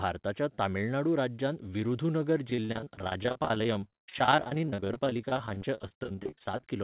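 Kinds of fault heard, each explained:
Repeated packet loss (robotic sound): audio packets kept going missing from 2.5 s, just after "तमिळनाडू राज्यांतल्या विरुधुनगर", through 6.64 s, with patched gaps up to 50 ms, making choppy speech with pieces missing.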